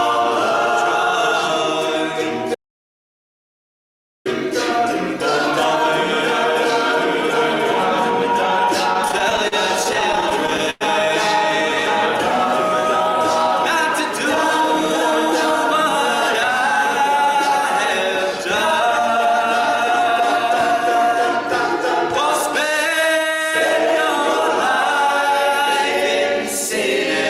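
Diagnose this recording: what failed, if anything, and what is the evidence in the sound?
From 2.55 to 4.26 s the sound cuts to silence for about 1.7 s. It is an audio dropout to silence, likely a lost input device or link.

Between 8.93 and 10.83 s the audio drags and stutters through 18 short stalls of up to 103 ms. These are repeated stalls: network jitter emptied the buffer, and concealment filled the gaps.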